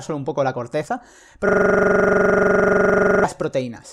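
Right after "un poco la corteza", at 1.49 s, the speech locks into a system hang loop that runs until 3.24 s. The machine or its audio driver stalled, but the sound hardware kept replaying the same chunk of its ring buffer, here about 43 ms long, which fits a 2048-sample buffer. That slice repeats exactly, 41 times, at about 23.4 Hz, so you hear a rough, rattling buzz-stutter in place of the speech.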